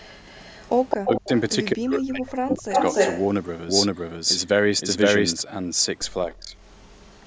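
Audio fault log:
0.00–1.28 s, 1.91–1.98 s, 2.50–2.55 s, 2.73–3.26 s and 6.69–7.26 s, echo leak: a delayed copy of the speech returns, most likely from a far-end loudspeaker whose echo canceller let it through. It trails by 215 ms at the start and by 295 ms afterwards. It is about 10 dB down at first, about 5 dB down and then as loud as the speech around 3 s, and very faint near the end. On a spectrogram the harmonic patterns repeat, shifted right by that lag.
1.07–1.32 s, 1.75–2.77 s and 6.26–6.55 s, speech suppressed in double talk: while both sides talk at once, the speech dips sharply. The likely cause is an echo canceller that could not tell its own talker from the returning echo and turned both down. The deepest drops are roughly 35 dB, 40 dB and 20 dB. On the waveform the envelope collapses in notches across each span. The spectrogram shows energy vanishing in vertical gaps.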